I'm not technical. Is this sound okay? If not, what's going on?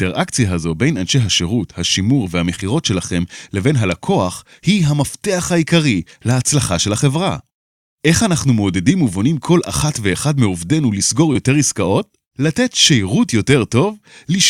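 No. There is short concealed packet loss at 2.55 to 2.59 s and 11.33 to 11.37 s: about 20 ms went missing, and the receiver extended the preceding sound to cover it, leaving brief smears.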